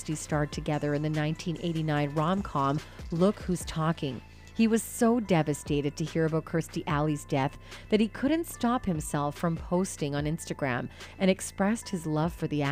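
No technical faults can be heard anywhere in this audio.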